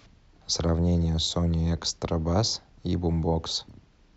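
Right near the end, at about 3.69 s, there's a quick blip that sounds like damaged data in a compressed stream. Bytes in that stretch of the encoded file came through wrong, so the decoder couldn't make sense of the frame it landed on, dropped sync, and had to hunt for the next valid header. What you hear is a very short glitch cutting across the speech, over in a fraction of a moment.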